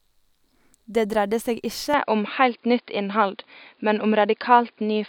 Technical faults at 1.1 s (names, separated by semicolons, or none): none